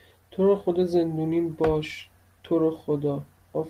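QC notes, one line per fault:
No fault found in this speech clip.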